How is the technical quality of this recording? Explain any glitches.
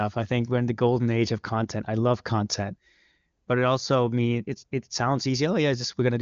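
The technical quality of this recording is good, and there are no glitches to explain.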